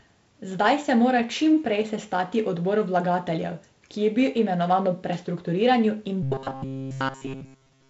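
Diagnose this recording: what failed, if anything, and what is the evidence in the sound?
A buffer likely starved from 6.23 to 7.90 s, repeating short chunks throughout; the robotic sound is a rigid 134 Hz buzz, fitting a 7.5 ms buffer.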